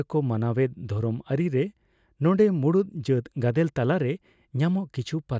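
Listening to this speech recording, nothing stood out as a technical problem.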